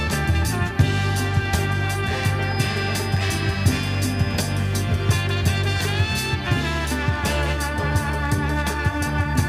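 A feedback whistle runs from 2.39 s to 4.66 s: a thin, steady tone at 5 kHz sitting roughly 20 dB below the main sound, swelling and fading slowly in level rather than building. The likely cause is a loudspeaker-to-microphone loop held just at the edge of instability, so a single high frequency keeps recirculating without running away into full howl. It lasts a little over two seconds at one fixed pitch.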